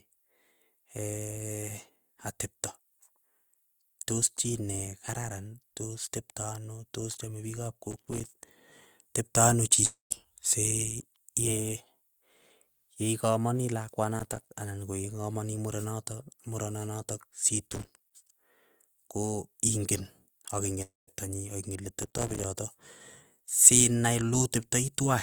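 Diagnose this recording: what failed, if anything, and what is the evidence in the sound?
Processor overload crackle shows up four times, at 7.91 to 8.43 s, 14.19 to 14.49 s, 17.67 to 18.13 s, and 22.02 to 22.44 s, the last one right after "nyii akingen". It's a driver or buffer problem. The CPU kept missing its deadlines on a very short buffer, a few milliseconds long, so dozens of tiny silent gaps with hard edges land back to back. You hear that as a gritty tearing crackle over the speech that stops once the load eases.

There are also two long network dropouts, at 9.85 to 10.12 s just after "teptoo anoo", and at 20.82 to 21.09 s just before "nyii akingen". About 260 ms of audio never arrived, most likely lost in transit on the network. The receiver papers over the gap by stretching the last sound into a fading buzz for roughly a quarter second, then leaves plain silence, about 150 ms the first time and 180 ms the second. 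The speech resumes further on, and the lost part never comes back.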